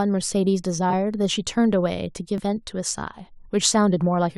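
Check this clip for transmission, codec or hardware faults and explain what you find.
Compressed frames are skipped twice in this speech, at 0.89–0.94 s and 2.36–2.40 s. Whole frames drop out, jumping the audio ahead about 50 ms and 70 ms. The spectrogram shows abrupt seams.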